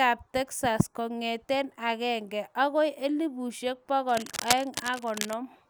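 Cable scratch noise runs from 4.09 to 5.34 s, just after "kongete agenge agoi elubushek": dense, uneven crackling and rustling sits over the speech at only slightly lower level. The likely cause is a worn cable or connector being moved, its contact resistance flickering.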